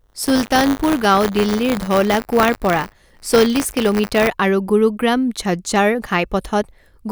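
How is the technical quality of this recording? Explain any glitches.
The recording has a clear technical fault in its first part. Buffer tearing runs from 0.0 to 4.27 s, ending just before "আৰু গুৰুগ্ৰাম". Writer and hardware pointers have slipped, so each period repeats a small slice, around a few percent, of audio from roughly 30 ms earlier. This produces a robotic 100 Hz buzz, consistent with a 10 ms period, heard only under the speech.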